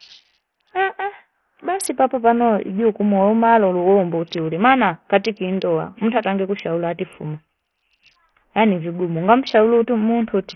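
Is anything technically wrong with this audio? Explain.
Yes. Throughout the speech, the audio carries heavy Bluetooth SBC compression damage, likely from a starved SBC bit pool, which fits a rate near 48 kbps. The upper sub-bands get almost no bits, so treble drops out and flickers, while coarse quantisation leaves gritty noise and aliasing.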